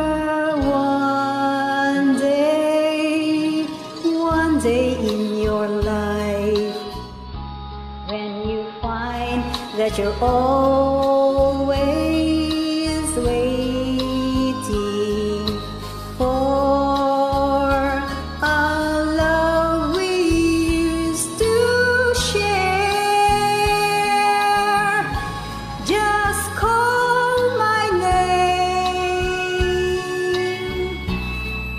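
At 6.93 s the receiver drops the digital stream and cross-fades over about 0.38 s to the AM analogue broadcast of the same station: a digital radio blend to analogue. From there to 9.37 s the level falls by about 4 dB, and a steady hiss sits roughly 30 dB below the programme. That hiss comes from the analogue path's noise floor.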